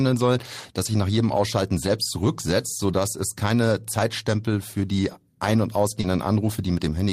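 At 0.85 to 0.87 s, between "soll das" and "sich nach jedem", a lost packet was rebuilt from error correction: a 20 ms low-bitrate copy fills it, sounding rougher and noisier. The same happens at 5.03 to 5.13 s over 60 ms, which fits three lost packets. At 6.01 to 6.05 s, short concealed packet loss extends the preceding sound for 20 ms, giving a brief smear. A packet rebuilt from error correction follows at 6.03 to 6.05 s.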